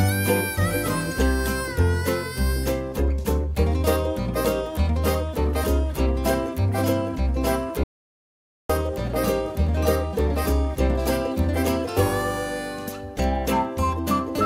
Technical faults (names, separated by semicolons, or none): audio dropout to silence